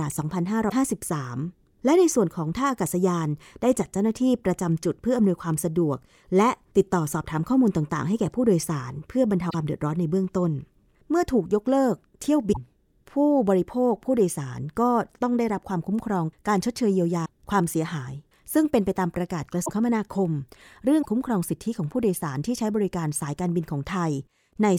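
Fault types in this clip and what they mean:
Broken MP3 bit reservoir: six 40 to 52 ms glitches, likely from cut MP3 frames leaving later frames with wrong borrowed bits; unlike a click, the speech skips ahead.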